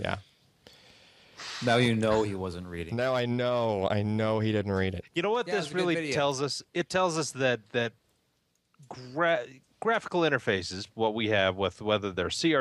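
No dropouts, clicks, distortion or level problems can be heard at any point in the clip.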